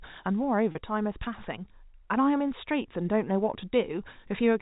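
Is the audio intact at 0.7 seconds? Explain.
No. From 0.72 to 0.75 s the sound briefly hangs on a slightly held, buzzy tone. This is packet loss with pitch repetition: a 30 ms gap, consistent with a single lost packet, is bridged by repeating the last pitch period.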